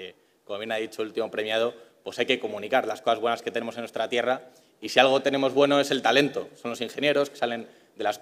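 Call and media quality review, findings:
No faults found in the reviewed audio. No component issues to log, and nothing here calls for follow-up.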